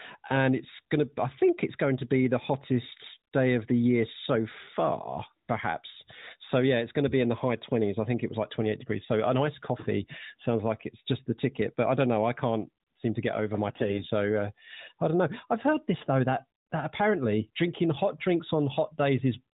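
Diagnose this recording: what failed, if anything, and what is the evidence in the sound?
What failed is the network path: these are AMR bit errors on a speech call through an AMR narrowband mobile codec (the 4 kHz ceiling fits its 8 kHz sampling, here in the 12.2 kbps mode). Around 3.08 to 3.17 s, just before "day of the year", and again from 13.68 to 14.08 s, between "to get over my" and "uh I don't know", the sound goes hoarse and gargly while pitch and level hold. A few percent of the weakly protected bits got flipped, so pulse positions and fine gain and spectrum values decode wrong.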